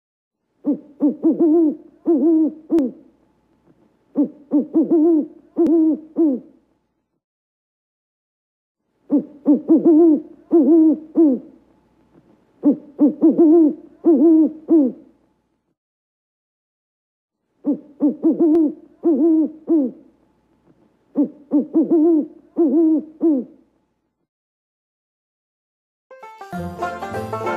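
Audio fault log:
2.79, 5.67, 6.76, 18.55 and 26.77 s, dropped buffer (overrun): each is a jump where the sound skips ahead with no gap. Roughly 20 ms is lost each time, and nearer 50 ms at 5.67 s. The likely cause is input buffers being overwritten before they were read.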